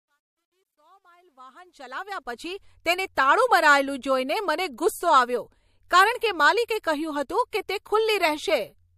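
From 0.0 to 2.66 s the speech fades in, but the quiet start shows truncation distortion on a fade: grainy, square-stepped grit, worst up to 1.41 s. The fade stage kept too few bits and added no dither, which fits about 12 bits. Unlike plain hiss, the grit tracks the signal.

Pre-echo comes next at 3.15 s, 5.88 s before "કારણ કે", and 7.50 s before "કે તે". A smeared hiss, about 17 to 25 dB above its surroundings, leads each attack by 21 to 25 ms. The codec spread quantisation noise across a 36 ms window without switching to short blocks. Unlike an echo, the smear comes before the sound, not after.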